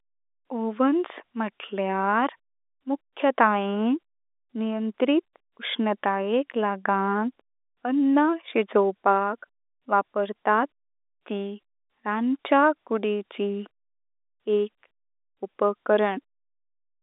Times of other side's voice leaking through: none

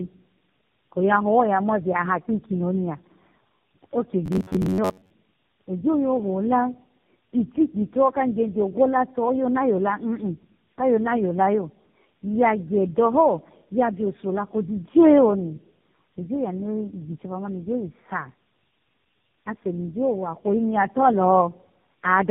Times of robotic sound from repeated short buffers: 4.26-5.11

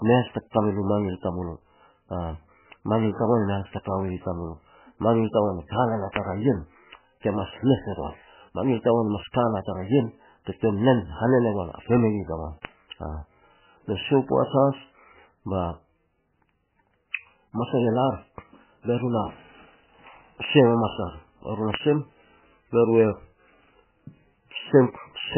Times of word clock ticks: 0.97-24.34

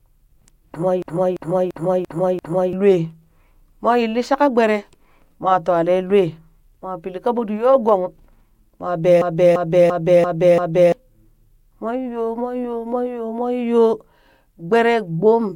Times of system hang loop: 1.02-2.73, 9.22-10.92

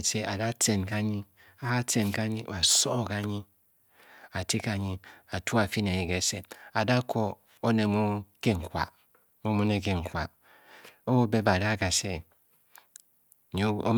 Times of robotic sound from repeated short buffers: none

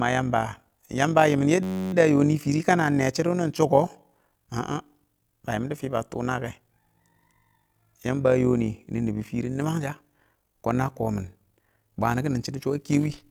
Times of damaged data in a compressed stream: none

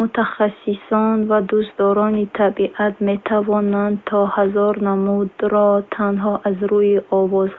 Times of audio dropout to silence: none

